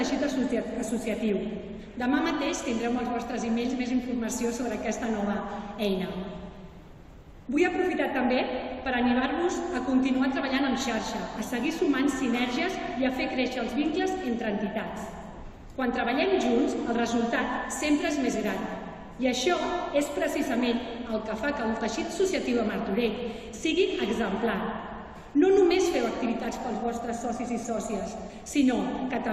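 Nothing to flag: no faults anywhere in the recording.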